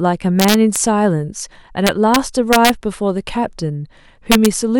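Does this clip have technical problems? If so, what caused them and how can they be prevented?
Yes. Integer overflow: a gain stage exceeded the integer range by about 1 to 2 dB and wrapped to the opposite sign instead of clamping, so loud speech peaks crack violently at 0.40–0.76, 1.87–2.16, 2.53–2.69 and 4.32–4.46 s. Use saturating arithmetic or a limiter before conversion.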